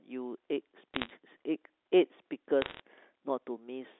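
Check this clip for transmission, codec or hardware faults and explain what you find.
Bit errors on a digital phone line are present, in two bursts: 0.94 to 1.1 s and 2.62 to 2.8 s. Flipped bits in the G.711 stream corrupt single samples, and hits on sign or high-order bits give sharp ticks. At an error rate somewhere under one percent, each burst sounds like brief crackle laid over otherwise intact speech.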